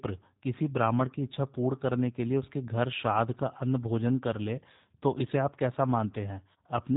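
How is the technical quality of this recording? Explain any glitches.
The speech sounds thin, slightly rough and synthetic across the whole recording, with audible codec damage and nothing above about 3.8 kHz. This comes from the G.729 codec, which fits an 8 kbit/s G.729A stream. Rather than storing the waveform, it rebuilds each 10 ms frame from a vocal tract filter, a pitch predictor and a few pulses per half-frame. That sparse model leaves the buzzy, artificial edge, and the narrow band removes the crisp, airy top end.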